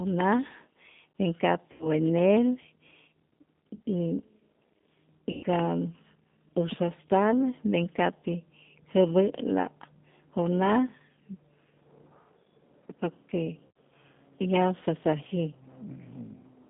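From the start the whole clip carries G.729 codec damage at 8 kbit/s. The line passes only about 150 Hz to 3.6 kHz, and the speech, rebuilt from a filter, pitch predictor and sparse pulses, sounds rough and faintly synthetic rather than just dull like plain band-limiting.

VoIP packet loss concealed by the speech codec interrupts it at 1.72–1.87 s, 3.75–3.80 s, 5.31–5.46 s and 13.68–13.75 s, covering about 80, 40, 120 and 80 ms of missing audio. At 20 ms per packet, those gaps point to runs of four, two, six and four lost packets. Instead of silence or a click, the decoder stretches the last sound into a buzzy tone or coloured noise that fades, and the voice stays weak for a moment after each gap. The longest smear is at 5.31 s.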